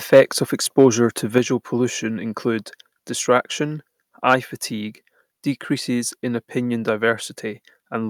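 From 0.13 to 0.21 s the loudest peaks turn harsh and crackly. This is microphone overload, likely from input gain set too high. The signal runs about 4 dB past the converter's limit, so a noticeable share of the waveform tops are flattened. A second burst follows from 0.78 to 0.86 s, about 2 dB over. It is milder, with fewer cut samples, but the same brittle edge.

At 1.38 s the whole sound drops abruptly by about 4 dB, just before "pollution include distraction". Voice and background fall together in one step. This is the microphone volume stepped down, likely by the call software reacting to the earlier clipping. It lowers the device's input level at once rather than fading it.

From 4.30 to 4.34 s microphone overload returns, between "pollution include distraction" and "fatigue decreases in opinion". The peak exceeds the limit by about 2 dB. Only a small fraction of samples are clipped, giving a brief crackle. 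The likely cause is a loud syllable still exceeding the converter ceiling despite the reduced gain.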